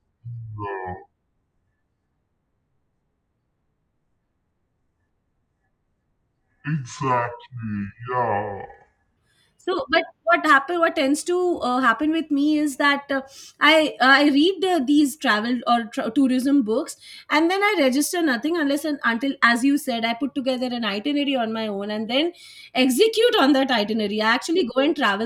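A playback or editing step has most likely run the opening of this speech recording against the wrong clock, giving a section at the wrong speed from 0.0 to 9.17 s. For those first nine seconds the audio plays at 0.585 times its recorded rate, so pitch and tempo drop together: the speech sounds drawn out and sluggish, sitting roughly ten semitones lower than it should, before it snaps back to its proper speed.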